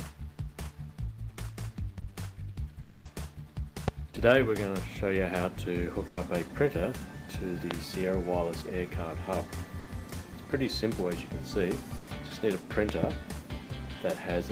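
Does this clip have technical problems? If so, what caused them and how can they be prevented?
Yes, there are four kinds of fault.

Short concealed packet loss: at about 1.99 to 2.03 s, roughly 20 ms of audio never made it to the decoder in time. The receiver papered over the hole by stretching out what it had just played and then eased back into the real signal, so you get a tiny smear or wobble rather than a clean gap. A wired connection or a slightly deeper jitter buffer would prevent it.

Long network dropout: from 2.81 to 3.07 s the stream stops, most likely because the network connection stalled for a moment, and about 240 ms is gone for good. The decoder keeps extending the last sound as a fading buzz or hiss across the whole gap, with no true silence, and then picks up further along without the missing piece. A more stable link, such as Ethernet instead of congested Wi-Fi, would prevent it.

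Loud pop: there's a single sharp pop at 3.88 s and another at 7.71 s, then a double pop between 12.89 and 13.06 s. Each one sits at about 20 dB above the surrounding sound, which keeps going underneath. These are most likely electrical transients from a cable being knocked, a switch, static discharge or a driver hiccup, sent straight into the signal path. Secure connectors and stable audio drivers would prevent them.

Burst of packet loss: there are three of these, at 6.07 to 6.19 s (about 100 ms lost), 9.79 to 9.89 s (about 80 ms) and 11.97 to 12.09 s (about 100 ms). In each, several packets in a row went missing, and the receiver held the last sound as a buzz or hiss that it turned down as the gap went on. The audio then jumps forward without the lost part. Cutting network congestion or enabling forward error correction would prevent them.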